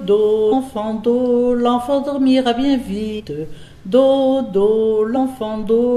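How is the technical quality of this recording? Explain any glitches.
The recording has three short glitches from damaged data in a compressed stream, at 0.51–0.53 s, 3.18–3.21 s and 5.16–5.18 s. Corrupted bytes made the decoder misread those frames and lose sync until it found a valid frame header again, producing a brief chirp or blip of about 20 ms each time.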